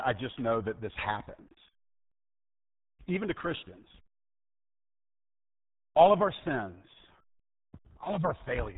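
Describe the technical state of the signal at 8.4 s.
At 8.4 s the speech carries the same RealAudio 14.4 codec damage present from start to finish. Content stops at about 3.8 kHz, leaving consonants dull and the voice boxed-in. The heavy coding damage makes vowels sound gargly and smeared. The coder keeps only a coarse model of the spectral envelope and a rough excitation, consistent with a roughly 8 kbit/s dial-up stream, so fine harmonic detail is lost.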